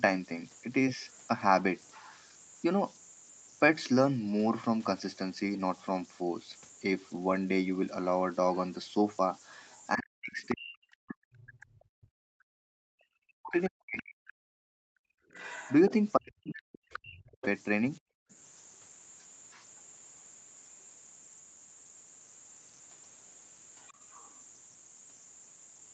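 Converter idle tones run through the whole clip. A whistle sits near 7 kHz, with grainy noise beneath quiet passages, about 22 dB below the signal. An undithered delta-sigma converter falls into repeating bit patterns at low input, and those patterns form the tone.

From 9.67 to 11.64 s, a second voice comes through at about 25 dB below the speech. It returns from 15.31 to 17.46 s, louder, at about 15 dB below. A last scrap follows from 23.79 to 24.4 s, at about 30 dB below. This is the other side's voice leaking through. The loudspeaker echo was likely not fully cancelled at the microphone.

From 9.95 to 15.16 s, the speech dips and breaks up for roughly 4 s in total. It drops by as much as 40 dB. A shorter dip of about a second follows from 16.15 to 17.43 s. Both overlap the leaking voice. This is speech suppressed in double talk. The echo canceller likely could not tell the talker from the echo, so it turned both down.

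From 18.0 to 18.3 s, the room sound drops away by about 40 dB for some 300 ms, then returns. This is background gated by the echo canceller. While the loudspeaker played, the canceller clamped the microphone hard, then released it.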